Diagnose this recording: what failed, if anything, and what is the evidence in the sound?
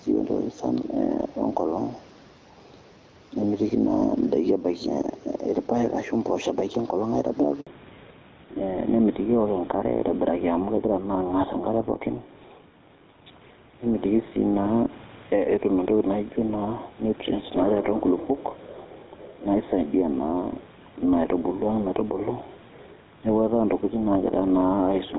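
Gain pumping runs through the whole recording, in the call processing stage. The gain swings by about 5 dB. The likely cause is microphone gain set far too high, with a fast limiter clamping every peak.

Handover gap at 7.61 s, a 60 ms dropout in the network stage. The sound fades within a few tens of milliseconds and goes silent until 7.67 s, when the new link starts delivering frames. Nothing spoken during that interval survives.

Fallback to narrowband from 7.67 s to the end, a codec change right after the network handover. Content above 4 kHz disappears, so the speech turns duller and rougher. Before the gap it extended into the wideband range. That fits a switch from HD Voice to GSM full rate.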